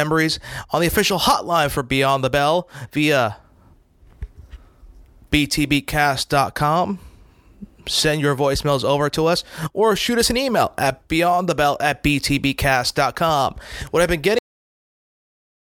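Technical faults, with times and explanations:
14.39 to 15.62 s, cut-off end: the speech stops abruptly right after "I've been", in the middle of the sound, and drops straight into digital silence for the remaining 1.2 s or so. There is no natural decay or room tail, because the final buffers of audio were never written to the file or sent to playback. The recording simply ends where the data runs out rather than where the speaker finished.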